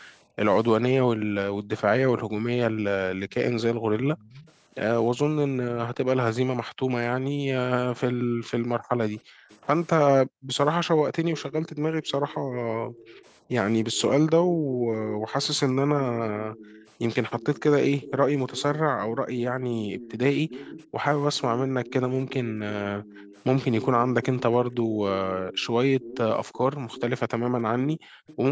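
Speech recorded over a call, with its bass trimmed and nothing above 8 kHz. The first fault is background gated by the echo canceller. The room sound sinks or vanishes in bursts from 0.24 to 16.52 s, dropping by about 40 dB at worst and for roughly seven seconds in total. Shallower dips of about 13 dB follow from 18.12 to 25.53 s. A final deep cut comes at 27.37 to 28.27 s. The canceller clamps the microphone while the far-end loudspeaker plays and releases it afterwards. The second fault is echo leak. A faint copy of the speech trails it by 308 ms. It appears at 3.33 to 4.52 s, about 25 dB down, and briefly at 9.49 to 9.58 s, about 30 dB down. From 11.36 to 28.36 s it is stronger, about 15 dB down. The likely cause is a loudspeaker at one end whose echo canceller let part of its own playback back into the microphone.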